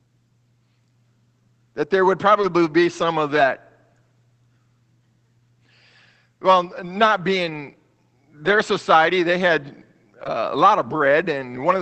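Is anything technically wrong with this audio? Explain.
Yes. Twice the speech briefly smears into a short wobble, at 2.41 to 2.45 s, between "that there would" and "be some of", and at 10.23 to 10.27 s. This is short concealed packet loss. About 20 ms never arrived, so the decoder extended the preceding sound and blended back.

Rougher, noisier patches appear at 2.43 s, 3.35 to 3.41 s just after "be some of", 7.45 to 7.55 s, 8.47 to 8.61 s just before "society they had", and 10.25 s. These are lost packets rebuilt from error correction. Each dropped stretch, 20 to 80 ms long, was replaced by a low-bitrate Opus copy carried in the following packet, so there is no gap, only coarser sound.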